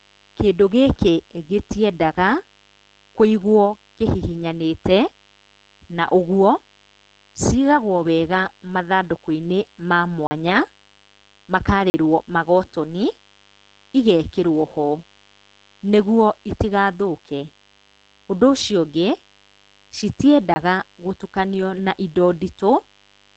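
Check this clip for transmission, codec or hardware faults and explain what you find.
Three faults are present: a mains buzz under the whole recording, heavy low-rate codec damage throughout, and three short dropouts to digital silence.

Mains buzz runs from start to finish. Sharp switching spikes from a dimmer, rectifier or unshielded lead enter twice per cycle of 50 Hz mains, spreading harmonics well into the kilohertz range. The result is a steady, raspy buzz roughly 35 dB below the speech.

Opus compression damage is also constant. The speech sounds muffled and hoarse, with nothing above 9 kHz. That narrowed, rough character fits Opus falling back to its SILK speech mode at a very low rate, around 12 kbps, which is likely the cause.

Blocks of digital silence occur at 10.27 to 10.31 s, 11.90 to 11.94 s and 20.54 to 20.56 s. They last 40, 40 and 20 ms. Each time, samples were replaced with zeros, typically because the output buffer went unfilled. 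The sound cuts off and back without any fade, leaving a brief hole.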